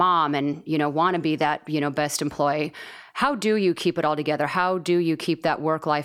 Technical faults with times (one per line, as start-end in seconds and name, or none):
none